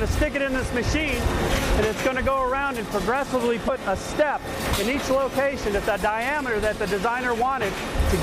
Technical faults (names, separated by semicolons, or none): damaged data in a compressed stream